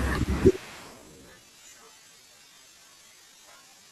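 Speech, with a time-stretched section that runs from 0.9 s to the end at 3.9 s. From that point the pace drops abruptly to about 0.61 times normal speed. The pitch stays where it was. Because the audio is slowed, it drags. The likely cause is software stretching this part to fill a set length. It holds the pitch by repeating short pieces of the sound.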